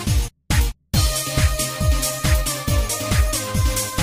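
No technical faults are audible.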